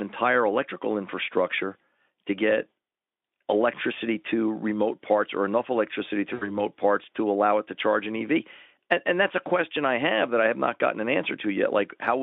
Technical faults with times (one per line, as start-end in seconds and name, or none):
6.33-6.55 VoIP packet loss concealed by the speech codec